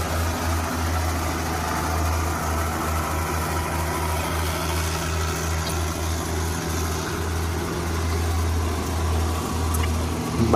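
Three short chirps of stray noise cut into the sound at 4.18 to 4.24 s, 5.64 to 5.71 s and 9.74 to 9.81 s. Each is a corrupt frame decoded: damaged bits in a few compressed frames were played anyway, throwing fairly loud energy into the wrong frequencies.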